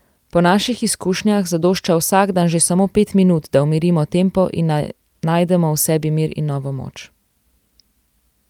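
Nothing goes wrong anywhere in this bit of speech, so there isn't a single moment with a technical fault to point out.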